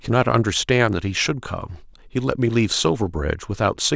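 No technical faults can be heard anywhere in the speech.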